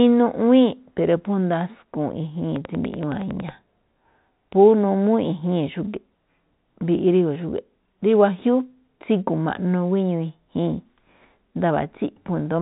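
Speech clip carrying a train of clicks from 2.56 to 3.50 s: about ten similar pulses at a regular 10.8 per second, peaking roughly 5 dB above the signal, likely from electrical interference or a faulty connection or power supply. The band stops near 3.9 kHz, consistent with G.711 telephone coding.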